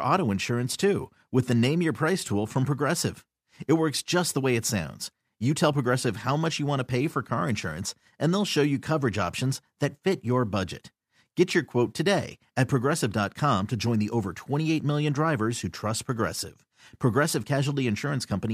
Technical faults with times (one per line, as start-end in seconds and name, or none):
none